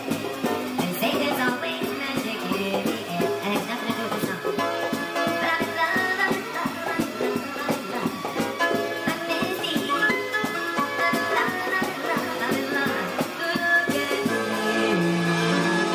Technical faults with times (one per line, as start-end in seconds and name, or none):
0.00-15.94 wrong sample rate